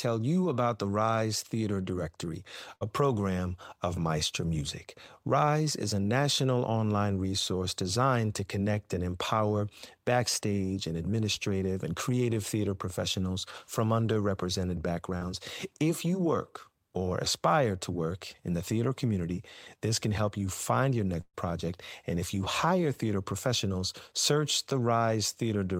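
It's a speech clip, and it has network damage in three places. There are two bursts of packet loss. The first runs from about 2.75 to 2.83 s, right before "program of". About 60 ms of audio goes missing there, and the receiver covers most of it (about 55 ms) by stretching the last sound and fading it out before the speech picks up further along. The second burst is bigger, from 21.21 to 21.36 s, just after "help you find your". About 120 ms is lost. The concealment holds the previous sound for roughly 126 ms while turning it down, then there's about 30 ms of actual silence before things resume with that stretch gone. In between, at about 15.17 to 15.23 s, right after "theater professionals from underrepresented", there's a short concealed packet loss. Only about 40 ms failed to arrive in time, and the decoder patched it by extending what came before and blending back in. You hear it as a quick smear rather than a clear gap.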